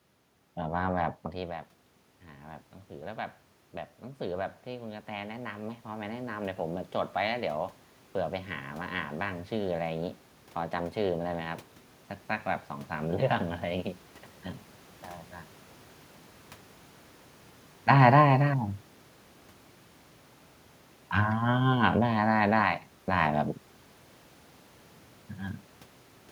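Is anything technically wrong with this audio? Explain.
Yes. Automatic gain rising, 4.0 to 6.91 s: the input fell by about 15 dB, so the gain control gradually added about 5 dB. Voice and room noise swell together, and the waveform envelope and the spectrogram's noise floor climb in a slow ramp.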